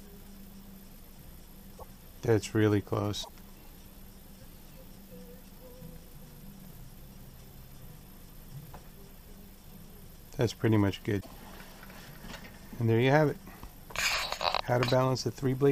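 At 1.74 to 1.83 s, 3.20 to 3.30 s and 11.17 to 11.27 s, damaged data in the compressed stream breaks decoder sync, producing short glitches about 0.1 s long.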